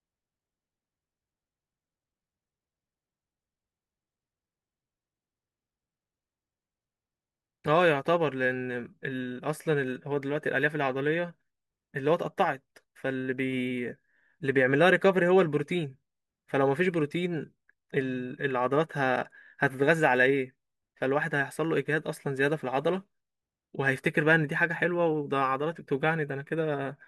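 No technical faults can be heard anywhere in this speech, so there is nothing to describe in time order.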